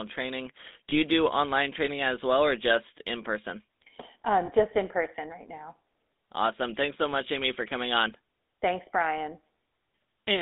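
Throughout, the speech carries GSM full-rate codec damage. Everything above 3.7 kHz and below 200 Hz is gone. The coarse pulse-driven excitation leaves a buzzy, gravelly roughness.

At 0.9 s, just before "you do online training", and at 4.46 s, before "just in person right", lost GSM frames occur. Each brief gap is filled by repeating the previous frame, giving a short metallic ring.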